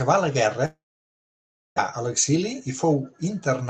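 From 0.65 s to 1.80 s the speech drops out, most likely a long network dropout. The last bit of sound gets smeared into a fading buzzy tail, then it's basically silence for close to a second before the speech picks up again. About 600 ms of audio simply never makes it back, so the speech resumes further along with that stretch gone. The Opus call path's roughly 8 kHz top end stays audible through the rest of the clip.

Right after, from 1.92 s to 3.62 s, there's a jitter buffer speed-up. The receiver had built up extra delay once things came back and is trimming it by snipping out tiny pitch-period-sized chunks over and over. That shaves off something like 150 ms, so the speech runs about 9% faster while the pitch stays put, and it comes across a bit rushed.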